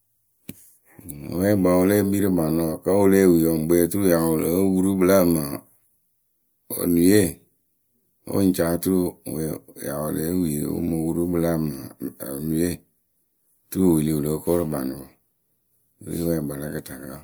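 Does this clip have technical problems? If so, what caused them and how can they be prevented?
No, nothing in this speech recording points to a technical fault, so there is no cause to trace and nothing to prevent.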